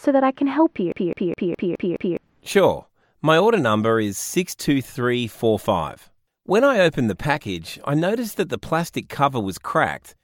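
A CD stuck on one turn runs from 0.92 to 2.17 s: the laser jumps back one track at the same point each rotation, so a 0.21 s slice of speech repeats six times, with a brief mute at every jump, giving a fast, even stutter.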